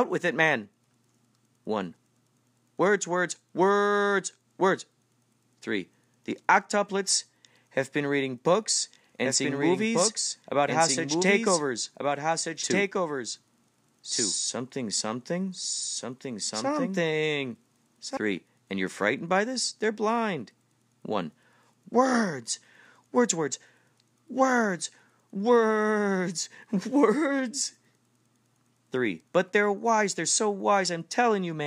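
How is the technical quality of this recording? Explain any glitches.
The recording has one clear fault. From 8.69 to 18.17 s there is a doubled audio track: a second copy of the speech trails about one and a half seconds behind, roughly 5 dB quieter. This is likely from a slower capture path or misaligned edit. Unlike an echo, it has no decay or room colour, and it starts and stops abruptly.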